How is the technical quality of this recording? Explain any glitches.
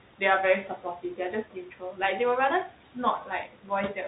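The quality is noticeably compromised. Two processing problems run through the whole clip, and the noise reduction also clips the speech itself in three places. The room noise sits about 18 dB below the speech, and you can still hear its remnants being worked on.

The noise suppressor artifacts are present from start to finish. The suppressor estimates which frequency bands hold steady background noise and pulls them down frame by frame, here by about 12 dB. Because that decision keeps shifting, the leftover room tone dips in the gaps and swells back under the speech.

The Bluetooth CVSD headset codec is also plainly audible throughout. This is the narrowband headset path, and the sound fits a 64 kbps CVSD link. The codec encodes each sample as a single up-or-down bit with an adaptive step size. Nothing above about 3.8 kHz gets through, so the speech sounds boxed-in and phone-like. Sibilants come out scratchy, louder high-frequency moments distort where the step can't keep up, and a grainy hiss rides underneath.

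Speech cut by the noise suppressor shows up at 0.69–1.19 s, 1.45–1.99 s and 3.46–3.70 s. In these spots the suppressor mistook parts of the speech for noise and turned them down along with the background, by up to about 9, 11 and 10 dB respectively. Only short stretches inside each window are affected, from roughly a tenth to a fifth of a second. Soft consonants and word endings there sound swallowed or noticeably fainter than their surroundings.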